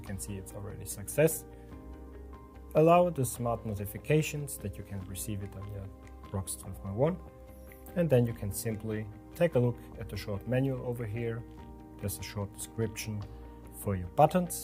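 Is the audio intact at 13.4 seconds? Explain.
Yes, the audio is intact at 13.4 seconds, with no dropout, click, distortion or other fault at that moment.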